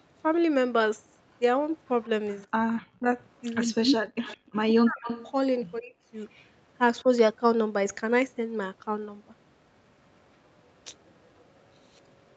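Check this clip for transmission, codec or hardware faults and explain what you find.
Two call-path faults are audible: a returning echo of the speech and bursts of suppression where both ends overlap. The 8 kHz upper limit fits a wideband call codec.

Echo leak occurs at 2.03–2.72 s, 4.25–5.31 s, 6.34–6.46 s and from 11.07 s to the end. A copy of the speech trails the original by 164 ms, likely from a far-end echo canceller passing loudspeaker pickup. It is loudest near 4.3–5.3 s, about 10 dB below the speech, and fainter elsewhere, down to about 40 dB below.

Speech suppressed in double talk appears at 2.72–3.09 s, 3.66–5.07 s, 5.78–5.94 s and 7.02–7.09 s. The canceller likely mistook overlapping speech for echo and attenuated everything. The first two stretches drop by roughly 40 dB and nearly vanish, while the later two are shallower, brief dips.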